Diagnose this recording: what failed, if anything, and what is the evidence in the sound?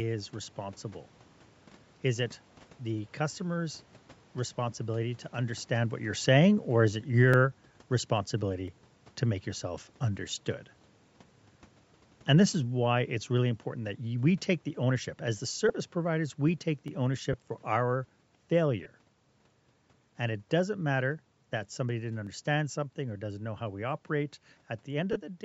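The speech carries a grainy, breathy edge on sibilants and upper harmonics throughout, where the top of the band has been thinned and refilled with noise. The likely cause is Bluetooth LC3 compression at the codec stage, and the damage is plainly audible, which fits a 48 kbps, 10 ms-frame setting.

Four dropped samples events are heard as single sharp clicks at 7.34, 8.68, 16.88 and 22.27 s. Each is a step in the waveform where under a millisecond of signal is missing, likely from a driver or buffer slip rather than the codec.

Lost LE Audio frames at the network stage cause the LC3 decoder to conceal the gaps with recycled, sign-scrambled spectrum, heard as brief noisy smears. They occur at 15.69 s (10 ms), 17.33 s (10 ms), 18.84 to 18.86 s (20 ms, fitting two frames) and 25.13 to 25.17 s (30 ms, fitting three).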